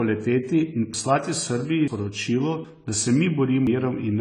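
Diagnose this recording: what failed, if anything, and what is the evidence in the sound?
At the codec stage, the speech has likely been through low-bitrate AAC compression, consistent with AAC-LC at around 24 kbps. With so few bits, the encoder lowers its cut-off and discards the top of the spectrum. It then quantises the surviving bands coarsely against its hearing model. The damage is plainly audible throughout. The speech sounds dull and smeared, and sibilants and held vowels take on a warbling, fizzy texture as bands are thinned or filled with substitute noise.

At the driver or buffer stage, capture likely fell behind four times, producing dropped buffers (overrun) at 0.94, 1.88, 2.65 and 3.67 s. Each time, the hardware overwrote samples before the program collected them, so the audio on either side is spliced directly with no silence in between. Each splice is heard as an abrupt jump forward in the speech. 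The first three losses are short, about a tenth of a second or a little more. The last, at 3.67 s, is longer, around 0.3 seconds.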